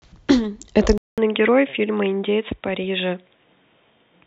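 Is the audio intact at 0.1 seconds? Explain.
Yes, at 0.1 seconds the speech is intact, with no dropout, click, distortion or other fault at that moment.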